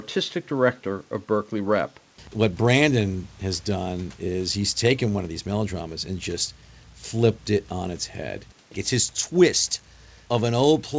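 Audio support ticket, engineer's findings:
No faults found in this speech clip. The call path sounds like G.722 at 64 kbps working normally, with nothing present above 8 kHz as that wideband codec band-limits it.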